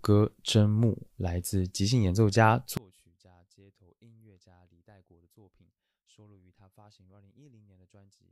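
From 2.77 s to the end of the clip, the speech suddenly drops by about 31 dB, background included, leaving only a small residue. The likely cause is one channel inverted: with one side's polarity reversed, everything the two channels share cancels when they are summed to mono. On a waveform the envelope collapses abruptly at 2.77 s and stays small. On a spectrogram the energy fades across the whole band at once rather than in any single region.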